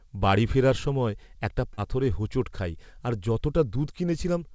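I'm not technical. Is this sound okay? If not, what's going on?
No. At 1.74–1.79 s, between "বাড়ি ফেরার সময় একটা" and "হোঁচট খাই আর", about 40 ms went missing: short concealed packet loss. The receiver patched the gap, leaving a brief smear.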